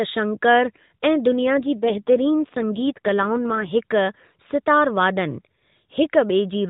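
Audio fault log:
1.32 to 3.72 s, AMR rate drop: The speech turns rougher, buzzier and more synthetic for this stretch, then recovers. There is no gap, and the band stays narrow, with nothing above 4 kHz, as it does across the whole narrowband mobile codec signal. The sound fits the AMR codec switching from about 12.2 to 5.9 kbps. With fewer bits, the few pulses that drive its vocal tract model are coded more coarsely, so the speech loses detail and turns mechanical.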